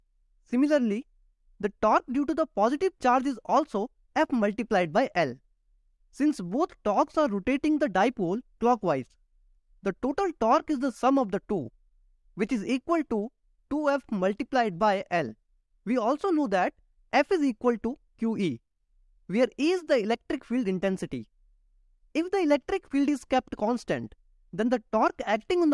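No technical faults can be heard anywhere in the audio, with the signal holding steady and continuous throughout.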